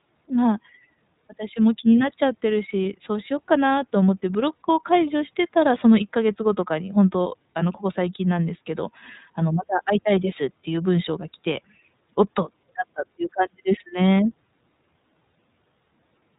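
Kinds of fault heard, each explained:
iLBC codec: This narrowband voice codec rebuilds each short frame independently from a compact description of its excitation, so the speech sounds plainly rough and slightly synthetic. The roughness fits a 30 ms frame, which suggests the 13.33 kbps mode. On a spectrogram, all energy stops sharply at 3.8 kHz, leaving the band above it empty for the whole clip. Harmonics look smeared and grainy, and the waveform loses fine detail.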